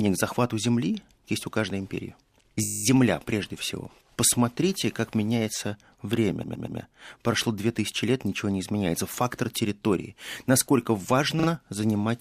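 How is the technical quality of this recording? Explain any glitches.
Three stutters from repeated frames: a 20 ms block replays ten times at 2.63 s, 120 ms three times at 6.43 s, and 40 ms twice at 11.39 s. Duplicated compressed frames are decoded again, lengthening the audio by the repeated time.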